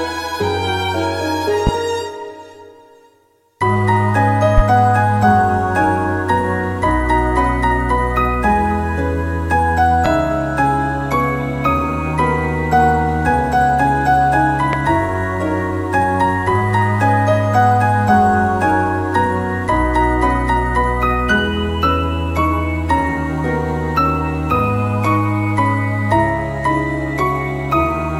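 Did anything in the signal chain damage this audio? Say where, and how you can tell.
Yes. Four loud pops sit at 1.67–1.70, 4.58–4.61, 10.06–10.09 and 14.73–14.77 s, each 35 ms long and roughly 15 dB above the sound, which continues underneath. They are likely voltage pulses in the analogue wiring, and show as tall isolated waveform spikes and thin full-height spectrogram stripes.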